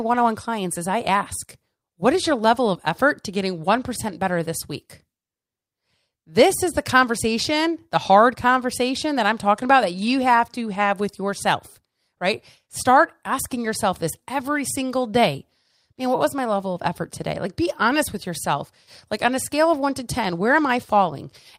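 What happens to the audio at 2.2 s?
Nothing goes wrong at 2.2 s; the speech there carries on intact, with no dropout, click, distortion or other fault.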